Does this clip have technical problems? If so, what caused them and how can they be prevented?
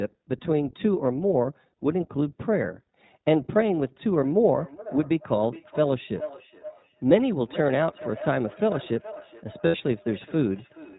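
Yes, there are three distinct problems here.

The whole clip has iLBC codec damage that's plainly audible. Nothing gets through above 4 kHz, so the speech sounds muffled, slightly rough and synthetic. That fits iLBC's 20 ms, 15.2 kbps mode. Negotiating a wideband codec like Opus on the call would avoid it.

From 4.12 s to the end there's feedback echo between two devices. The speech comes back roughly every 0.4 s, thinner and ringier each pass, peaking about 15 dB below the direct speech. A second device in the room is replaying what the first one's microphone sent, and that microphone picks it up again. Muting or leaving the call on one of the two devices prevents it.

At 9.66 to 9.77 s there are lost iLBC frames. For about 80 ms the sound turns into a held, buzzy vowel while the decoder repeats the last pitch cycle, and then it snaps straight back. That fits about four dropped 20 ms packets. 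A steadier network path or a larger jitter buffer helps here.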